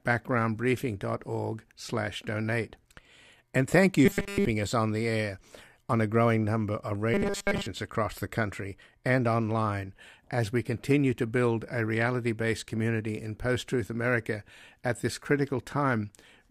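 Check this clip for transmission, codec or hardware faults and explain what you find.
Two stretches show robotic sound from repeated short buffers, at 4.06–4.45 s and 7.14–7.67 s. New audio likely arrived too slowly, so a 5 ms slice kept looping in place of the real signal. That imposes a rigid 200 Hz metallic buzz over the speech, throughout the first stretch and across most of the second.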